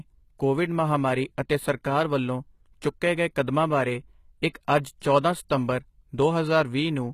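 From the start, the speech has treble that sounds bright but false. S sounds are gritty and metallic, and nothing reaches above 14.9 kHz. This is likely HE-AAC compression at a low bitrate, around 20 kbps, rebuilding the top octave from copied lower bands rather than simply dulling it.

From 4.49 to 4.55 s, just after "ਚੁੱਕੇ ਗਏ ਕਦਮਾਂ ਬਾਰੇ" and before "ਅੱਜ ਚੌਂਦਾ", pre-echo adds a short hiss about 59 ms long ahead of the next attack, which sounds softened. The codec's noise leaked backward within its block. Unlike a click or dropout, it comes just before the attack.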